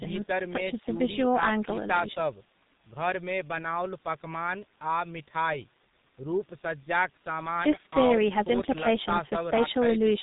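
Throughout, the speech carries heavy G.723.1 codec damage, consistent with its 6.3 kbit/s mode. Coarse 30 ms frames and slow voice-model updates leave it muffled and hoarse with smeared consonants. A spectrogram shows nothing above 4 kHz and blurred, blocky formant transitions.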